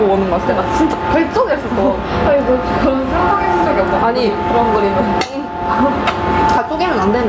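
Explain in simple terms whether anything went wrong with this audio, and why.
Something went wrong throughout the clip: gain pumping. Loud and soft parts end up closer in level, and the sound is squashed. The likely cause is input set far too high, with a fast limiter pulling it down hard.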